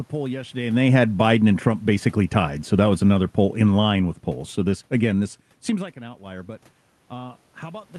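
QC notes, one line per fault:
0.61–5.3 s, automatic gain falling: the gain control judged the input too loud or its background noise too strong and lowered its gain gradually by about 7 dB, so the speech and room noise sink together.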